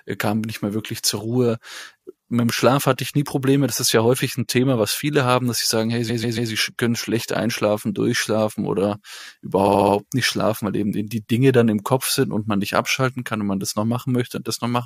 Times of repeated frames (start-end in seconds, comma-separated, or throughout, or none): 6.09-6.50, 9.66-9.94